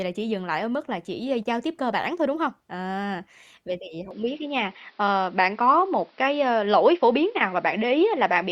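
At 4.11 s, just after "vậy thì", the input was likely switched to a poorer device. Thereafter nothing passes above 5.7 kHz, so the speech turns dull and boxy, the level shifts by about 5 dB, and new background noise sits about 40 dB down.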